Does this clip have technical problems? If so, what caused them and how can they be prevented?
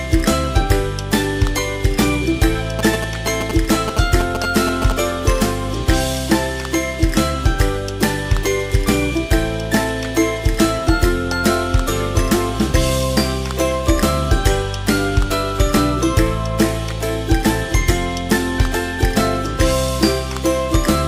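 Yes. From 2.79 to 4.92 s there are GSM signalling bursts, a galloping dit-dit-dit of short 217 Hz buzzes only a few dB under the sound. A nearby 2G phone's pulsed radio transmissions were rectified by the audio circuit. A spectrogram shows clustered vertical stripes with harmonics every 217 Hz, and the waveform shows grouped spikes. To prevent this, keep phones away or in flight mode, and use shielded cabling with RF filtering.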